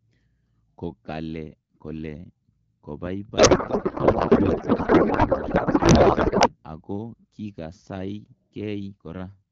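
From 3.37 to 6.64 s the speech becomes garbled noise and warble that barely tracks it. This is a codec payload misread: octet-aligned AMR-WB frames unpacked as bandwidth-efficient, displacing every field. Unlike packet loss, nothing drops out; the decoder keeps producing confident nonsense throughout.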